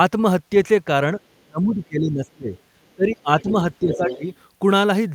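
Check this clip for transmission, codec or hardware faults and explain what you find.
Two faults show up, both pointing to an echo canceller struggling while both ends of the call talk at once.

Speech suppressed in double talk, from 1.4 to 2.54 s, 2.96 to 3.54 s and 3.8 to 4.24 s. The echo canceller likely could not tell the local talker from loudspeaker echo, so it pulled down the whole microphone signal. The speech sinks by roughly 30 dB in the first stretch, around 20 dB in the second and only about 10 dB in the third, dipping rather than staying level.

Other side's voice leaking through, at 2.56 to 2.61 s, 3.4 to 3.52 s and 3.92 to 4.16 s. The far end is likely played on a loudspeaker, and the canceller left part of it in the microphone feed. The first scrap is very faint, about 40 dB under the speech, while the later two come through at roughly 10 to 15 dB below it, overlapping the suppressed stretches.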